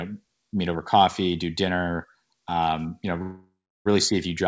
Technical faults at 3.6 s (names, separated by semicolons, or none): call audio freeze